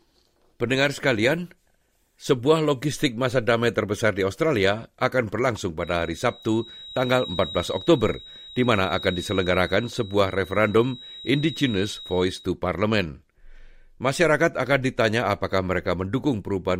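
From 5.76 s to 12.52 s, just after "akan berlangsung", a thin, steady whistle near 3.8 kHz sits roughly 15 dB under the speech, swelling and fading slowly. It is likely a feedback whistle, with the speaker-to-microphone loop poised at feedback. Unlike a runaway howl, it never builds.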